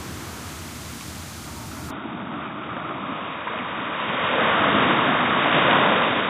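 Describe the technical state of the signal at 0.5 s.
At 0.5 s the signal is intact, with no dropout, clipping, distortion or other fault audible at that moment.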